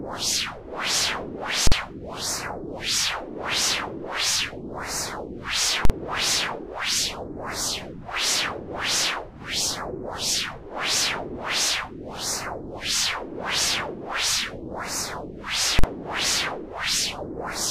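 This sound clip has invalid numbers at full scale three times: 1.67 to 1.72 s, 5.85 to 5.90 s and 15.79 to 15.84 s. Each time, a bad calculation pins the output flat at one extreme value for about 46 ms, which fits a 2048-sample block, and this is heard as very loud popping.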